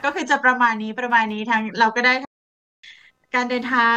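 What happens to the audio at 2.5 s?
A playback stall runs from 2.25 s to 2.84 s, silencing the speech for about 0.58 s before it resumes. The player most likely ran short of data or had its thread blocked, so the output simply stopped mid-flow until it recovered.

Computer activity noise is also present through this moment, a buzz pulsing at roughly 200 Hz and sitting around 35 dB below the speech. It comes from processor or peripheral load shifting the shared ground of the audio circuit, so it follows the machine's activity rather than the speech.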